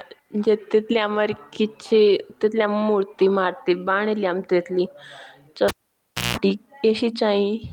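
At about 5.68 s the speech is interrupted by a cable pulled and plugged in. A sharp pop cuts the audio, then there's roughly 640 ms of near silence while the lead is out. As it goes back in, the tip touches first and you get about 180 ms of 60 Hz mains buzz from the ungrounded contact, then a second pop when it seats fully and the sound returns at around 6.37 s.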